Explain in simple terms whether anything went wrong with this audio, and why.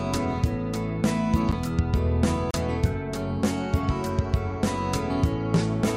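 Two brief dropouts interrupt the sound. At 1.52 s there is a quick tick, and from 2.51 to 2.54 s a longer pop with a tiny hole of about 32 ms. Each is a block of digital silence: for a moment the audio was swapped for silence, with no fade in or out. The first gap lasts about 11 ms, which fits a 512-sample buffer that wasn't filled in time.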